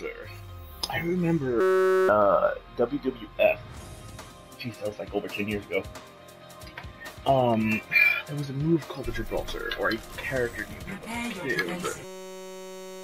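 System hang loop at 1.61 to 2.09 s and again from 12.04 s to the end: the system stalled while the hardware replayed one 5.33 ms buffer, fitting a 256-sample ring, giving a steady 188 Hz buzz and losing roughly half a second, then about a second.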